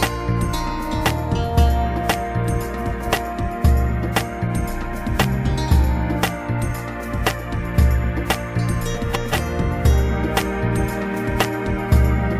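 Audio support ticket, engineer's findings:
Frames out of order, 2.77–3.08 s: short garbled flutter, two adjacent runs of about 139 ms swapped, which fits three frames per run. Frames arrived out of order; decoder plays as received. No time lost.

Frames out of order, 8.95–9.34 s: same flutter, longer. Swapped runs of about 186 ms, consistent with four frames each. Same reordering; duration intact.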